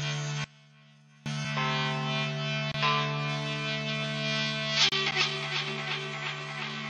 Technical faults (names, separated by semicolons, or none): one channel inverted; block of digital silence; gap between stream segments